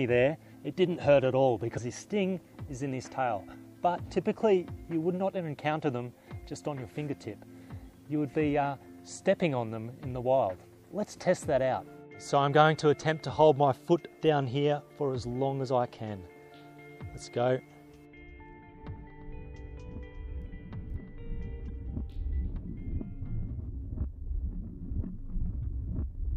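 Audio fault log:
1.77–1.79 s, 21.67–21.70 s, 25.61–25.65 s: broken MP3 bit reservoir. The audio skips ahead with a chirp, noise burst or gap, each about one 26 ms frame long. Likely cause: missing frames made the next frame read another frame's bytes.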